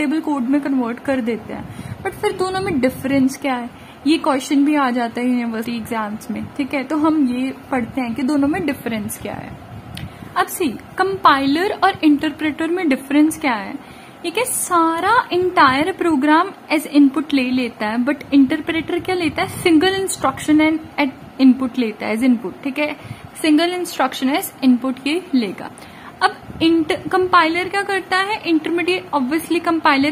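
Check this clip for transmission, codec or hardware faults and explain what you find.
Two brief smeared blips, at 5.63 s and 25.67 s, mark compressed frames skipped. The sound jumps ahead, roughly 150 ms at the first and about 70 ms at the second, consistent with whole 26.1 ms frames being missing or rejected as damaged. Because adjacent frames overlap, each join smears rather than clicks.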